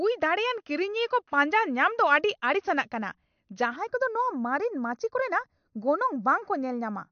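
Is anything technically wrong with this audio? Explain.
Yes, two faults. Throughout, the speech sounds watery with nothing above 6.5 kHz, likely from MP3 compression at a low bitrate of about 54 kbps. From 3.76 s to the end, one channel lags by a fraction of a millisecond before summing to mono, causing channel delay (comb filtering): a hollow sound with a notch around 3 kHz.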